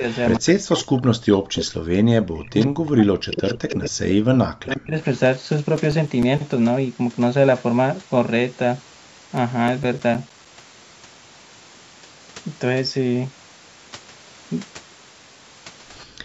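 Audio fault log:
0.00–4.96 s, speech suppressed in double talk: the voice repeatedly sinks, dulls or breaks apart for most of the first five seconds, dropping by up to about 40 dB. The likely cause is an echo canceller that could not separate the local talker from the far side's loudspeaker echo, so it turned both down.
0.11–0.49, 1.35–1.66, 2.60–2.66, 3.31–3.54, 4.70–5.18 and 15.99–16.05 s, echo leak: a delayed copy of the voice trails the original, 113 ms behind in the first two spots and 93 ms behind in the rest, about 10 to 30 dB below the speech. This is likely loudspeaker pickup that the echo canceller failed to remove and that was sent back.
5.76–6.53 and 9.37–10.76 s, CD scratch ticks: a regular train of short clicks, about seven a second, each lasting a few milliseconds, with six in the first run and ten in the second. On each turn of the disc a blemish destroyed more data than error correction could rebuild, so the player patched or muted those samples.
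16.06–16.24 s, background gated by the echo canceller: the room sound drops away by about 40 dB for roughly 200 ms at the very end. The canceller clamped the microphone hard while the loudspeaker was playing.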